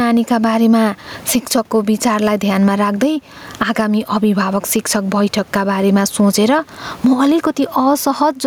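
A speech recording with gain pumping running throughout. The background noise sits about 36 dB below the speech, and the level swings by about 15 dB. The likely cause is input gain set far too high, with a fast limiter clamping down on every peak. On a waveform the envelope looks flattened.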